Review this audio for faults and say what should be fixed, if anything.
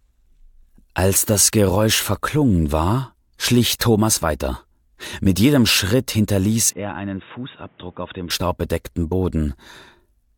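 From 6.7 to 8.3 s the sound turns dull and quieter. Nothing passes above 3.8 kHz. This is likely an input switched to a poorer device. Lock the recording to one input device so the system cannot switch it in mid-take.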